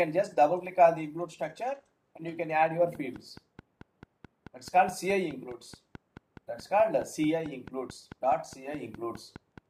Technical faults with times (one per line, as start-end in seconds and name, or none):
2.95-9.59 train of clicks